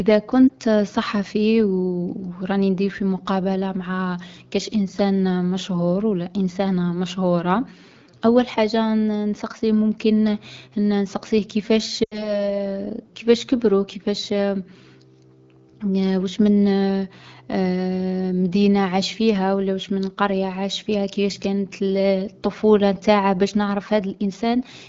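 At 0.48 to 0.52 s, a single lost AMR speech frame causes a brief warble. Between 12.03 and 12.41 s, a longer run of lost AMR speech frames, consistent with about four frames or 80 ms, drops the sound to near silence within two frames. The decoder repeats the last good pitch and vocal-tract settings with falling gain, so the sound fades toward silence before returning weak. On a spectrogram this shows as smeared, repeated harmonics thinning into a dim gap. On a waveform the envelope tapers, then rebuilds.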